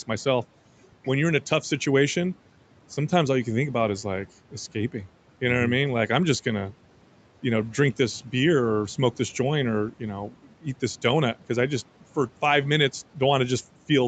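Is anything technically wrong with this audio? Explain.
Yes, there is one fault. Between 10.3 and 10.66 s, just after "this joint or you" and before "this donut because I", part of the speech turns faint and swallowed, dropping by about 12 dB over roughly 150 ms. This is speech cut by the noise suppressor, which mistook those quieter speech sounds for background and turned them down along with the room noise.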